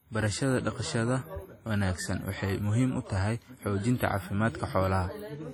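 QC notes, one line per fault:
Throughout, WMA compression: the speech sounds washy and ringing, with a hiss that swells and fades along with the voice, and sound near consonants is smeared rather than crisp. This is likely the work of a Windows Media Audio transform encoder using long blocks, so quantisation noise spreads over tens of milliseconds and weak spectral lines drop out entirely. The heavy damage fits a low bitrate near 32 kbps, and nothing remains above 19.1 kHz.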